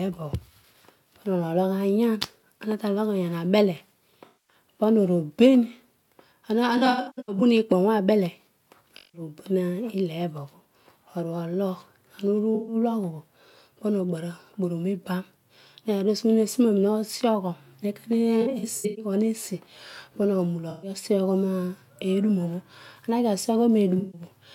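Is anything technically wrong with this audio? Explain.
Yes. The speech has AAC frame loss with concealment at 4.25–4.56, 6.77–7.41, 8.96–9.21, 12.55–12.75, 18.41–19.04, 20.70–20.90 and 23.98–24.21 s. The decoder rebuilds missing frames from the last good spectrum, so each patch sounds smeared or noisy. On a spectrogram these appear as blurred, frozen bands, broken into runs of up to about 100 ms in the two longer stretches; the waveform loses its normal fine detail there.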